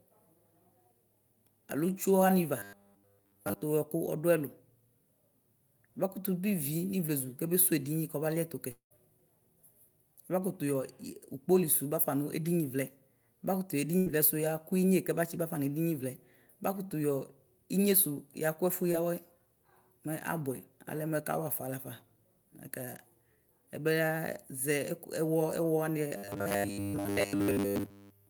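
From 2.59 to 3.62 s the sound turns into a rigid, metallic buzz pitched at 100 Hz that only loosely tracks the speech. This is robotic sound from repeated short buffers, and the likely cause is a 10 ms stretch being replayed over and over, across essentially all of that span, while incoming audio ran late and the real material was skipped.

At 8.71 to 8.93 s the last sound is held and fades away, leaving a brief silence before the speech returns further on. This is a long network dropout, likely about 200 ms of audio that never arrived. Around 191 ms of it was papered over by extending the last sound.

Between 13.99 and 14.08 s the last sound is briefly held and dies down, and the speech picks up slightly later. A burst of packet loss removed about 80 ms, and the receiver stretched and faded the preceding sound across roughly 75 ms.

At 18.92 to 18.96 s there is a tiny smear. Short concealed packet loss cost about 20 ms, and roughly 17 ms of continued sound bridged the gap before it blended back into the real audio.

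From 26.17 s to the end the 100 Hz metallic buzz returns. Most of that stretch likely consists of repeated buffers rather than fresh audio.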